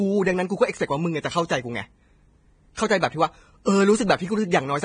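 From start to end the speech is hissy and grainy, with nothing above 9.7 kHz. Consonant attacks are blurred, and the tonal parts of the voice sound roughened. This is most likely heavy Vorbis compression at a low bitrate, with the sound pointing to something near 23 kbps. At that rate the encoder lowers its cut-off and quantises the treble residue so coarsely that fine detail is replaced by noise of similar energy sitting on the smooth spectral floor.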